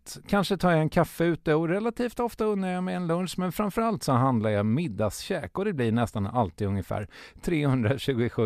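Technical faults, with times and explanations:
No technical faults detected anywhere in the speech recording.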